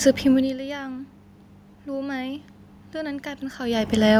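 From 1.85 s to 4.15 s the speech and the room noise behind it swell together, slowly growing by about 4 dB, with the background lifting in step with the speech. This is automatic gain rising: the level reaching the microphone had fallen by about 14 dB, and the gain control compensated by raising its gain over roughly two seconds. Shifts in level near half a second and again around three and a half seconds come from the talker moving.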